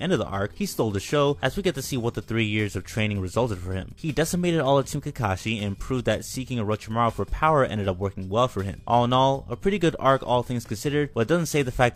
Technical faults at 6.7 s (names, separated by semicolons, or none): none